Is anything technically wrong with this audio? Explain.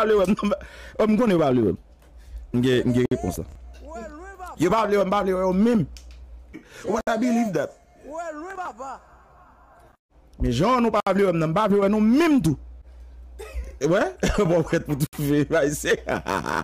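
Yes. A gap at a join of encoded pieces recurs roughly every 4 seconds, at 3.06, 7.01, 11.00 and 15.07 s, lasting about 56 ms the first time and 64 ms after that. The sound seems to have been encoded in separate pieces and joined without removing each run's start-up delay and final-frame padding, so a short silence opens and the sound resumes where it left off. On a waveform these show as flat dropouts with slightly softened edges, and on a spectrogram as thin vertical blank strips across all frequencies.

Processor overload crackle appears twice, from 3.34 to 3.56 s and from 8.51 to 8.68 s. The system could not finish its small audio buffers on time, probably around 10 ms each, and the missed buffers were skipped rather than repeated. That leaves a rapid string of tiny hard-edged gaps, heard as gritty tearing over the sound that stops once the load eases. A spectrogram shows dense broadband vertical clicks, and the waveform shows many small chopped discontinuities.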